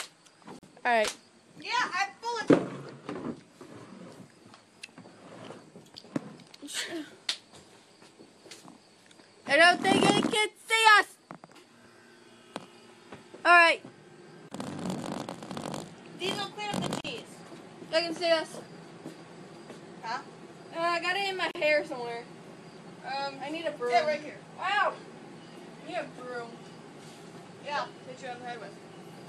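Four gaps at a join of encoded pieces break the audio at 0.59, 14.49, 17.01 and 21.51 s, lasting about 42, 30, 40 and 39 ms. Each shows as a narrow vertical blank stripe on a spectrogram and a brief collapse in the waveform, from separately encoded pieces joined with their padding untrimmed.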